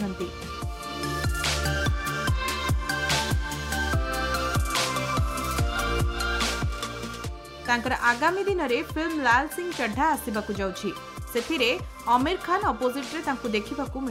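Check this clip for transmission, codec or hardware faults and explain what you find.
No transmission, codec or hardware faults can be heard in the clip. There is nothing in the audio that calls for further explanation.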